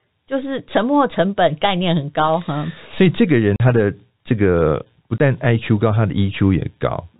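Speech at telephone bandwidth, with packet loss filled with silence. The sound drops out cleanly twice. The first hole runs from 3.56 to 3.60 s and lasts 40 ms. The second runs from 5.18 to 5.20 s and lasts 20 ms. Both lengths are multiples of 20 ms, which fits two lost 20 ms packets and then one. The receiver inserted silence for each missing stretch, so the edges cut hard.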